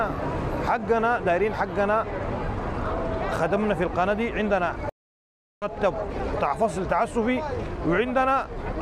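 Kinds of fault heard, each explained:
Stream reconnect: the connection dropped, leaving 0.72 s of silence at 4.89 s, then a fresh decoder resumed the sound roughly half a second later.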